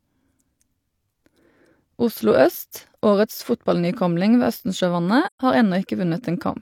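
At 5.26 to 5.40 s, AAC frame loss with muting leaves a soft-faded hole of roughly three frames; unlike a hard dropout, its overlapping windows fade the sound out and in rather than cutting it abruptly.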